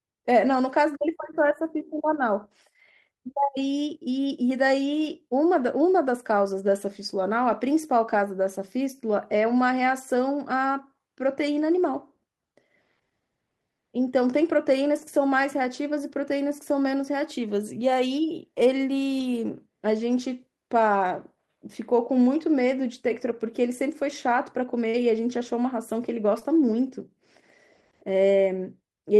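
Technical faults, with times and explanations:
7.51, 14.97, 19.19, 24.93 and 26.41 s: lost packet rebuilt from error correction. Each 20 ms of speech came from the next packet's low-bitrate copy. It leaves no gap, just a rougher, noisier patch.
24.89–24.95 s and 26.39–26.43 s: short concealed packet loss. The decoder stretched the preceding sound across about 40 ms and 17 ms, giving a brief smear before the rebuilt frame.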